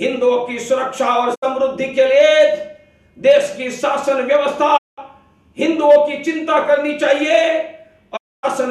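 Digital broadcast dropout interrupts this audio three times: the receiver lost valid frames and muted, so the sound fades out over about 20 ms into silent holes at 1.34–1.44 s, 4.76–5.00 s and 8.16–8.45 s, with whatever was sent during them lost.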